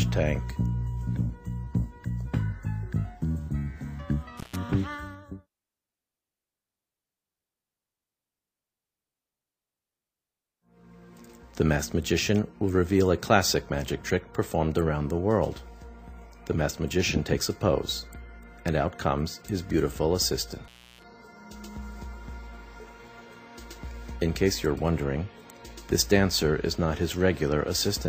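A loose cable or plug connection briefly breaks the signal path twice, an intermittent contact fault. From 4.37 to 4.56 s the line opens for about 133 ms, and from 20.64 to 21.04 s for about 307 ms. Each time the sound drops out abruptly with crackle at the edges as the contact scrapes open and closed, and faint hiss remains in the gap. The second dropout lasts more than twice as long as the first.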